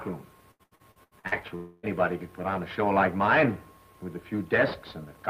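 From 0.51 to 1.35 s there's repeated packet loss, giving a robotic sound: seven short holes, the longest about 79 ms, patched by stretching earlier audio, so roughly half that span sounds choppy. Then from 1.56 to 1.86 s the sound smears into a fading buzz or hiss with no real content, likely a long network dropout covered by concealment rather than silence.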